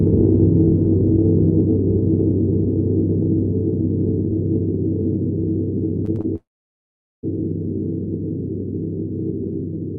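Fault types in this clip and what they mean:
Short concealed packet loss: Three bursts of about 20 ms each went missing in quick succession at 6.05, 6.15 and 6.21 s. Each hole was patched by extending the preceding sound and blending back into the real signal, so the audio smears or wobbles briefly instead of breaking. On a spectrogram these show as short stretches of repeated, slightly blurred harmonic or noise texture. In the waveform, each is a short, oddly regular patch with no hard gap.
Long network dropout: From about 6.36 to 7.25 s, roughly 0.88 s of audio never arrived, which is likely a network stall. The receiver briefly carried the last sound forward as a fading buzz or hiss, then went silent for about 0.8 s before the audio resumed, with the lost portion gone. A spectrogram shows a short smeared tail dying into an empty band, and the waveform flattens to near zero until the signal abruptly returns.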